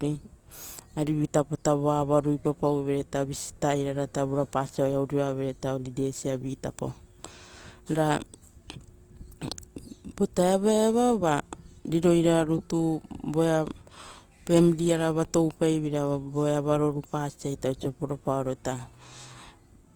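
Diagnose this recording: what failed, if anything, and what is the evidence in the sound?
Throughout the speech the tone is grainy and rough, with harmonics smeared into noise, yet the band reaches 20.2 kHz with few holes. This is likely Opus compression at the codec stage, with bands filled by folding or noise, which fits music-mode encoding near 24 kbps.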